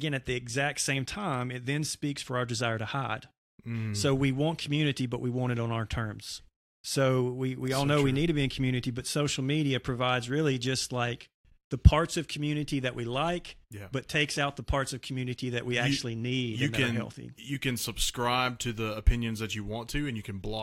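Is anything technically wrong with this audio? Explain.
No, nothing is technically wrong with this audio.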